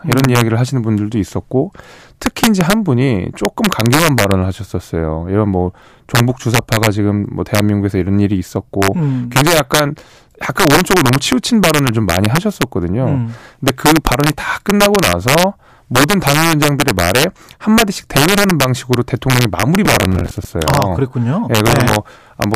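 Integer overflow runs through the whole speech clip. Peaks pushed about 3 dB past the limit wrap to the opposite sign, giving sharp cracks on under one percent of samples.

From 19.85 to 20.45 s comes processor overload crackle. Around twenty missed deadlines repeat stale audio in chunks that fit buffers of about 10 ms, producing gritty crackle.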